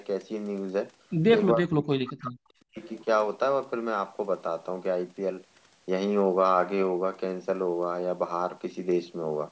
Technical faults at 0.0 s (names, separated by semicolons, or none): none